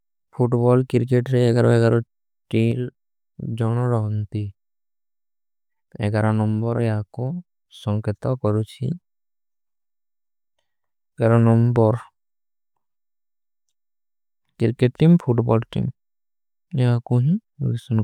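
Speech, with a sudden gain jump from 2.72 s to 2.95 s: for about 0.23 s the whole signal drops by about 5 dB and then returns, the change landing between one sample and the next rather than sliding. The likely cause is a digital gain setting or bit shift applied without a ramp. Unlike a fade or compressor pumping, there is no gradual slope, and the background noise steps down and back up in exact lockstep with the speech.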